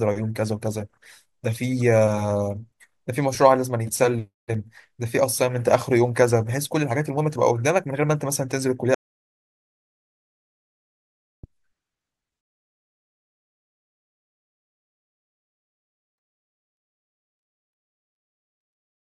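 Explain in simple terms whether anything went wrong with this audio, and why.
Partway through, the speech suddenly cuts out at 8.95 seconds and comes back at 11.44 seconds. For about two and a half seconds there is complete, dead silence, not even the faint background hiss of the room. This is an audio dropout to silence. The likely cause is that the recording lost its input for a moment, through a loose connection, a failed link or an accidental mute, while the recorder kept writing silence. Whatever was said in that gap is gone.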